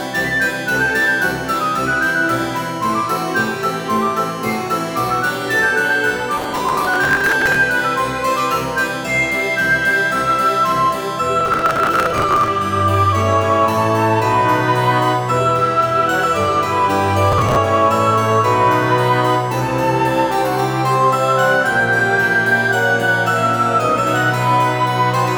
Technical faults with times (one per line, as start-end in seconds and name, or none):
6.38-7.56 processor overload crackle
11.41-12.48 processor overload crackle
17.32-17.57 processor overload crackle